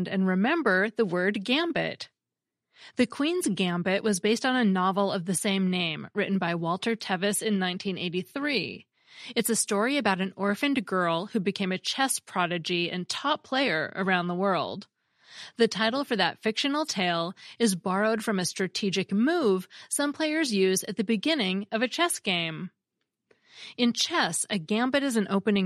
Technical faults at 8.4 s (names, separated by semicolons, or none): none